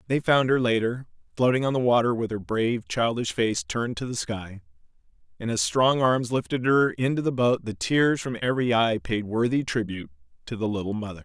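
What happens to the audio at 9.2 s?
Nothing goes wrong at 9.2 s; the speech there plays through intact, with no dropout, click or distortion.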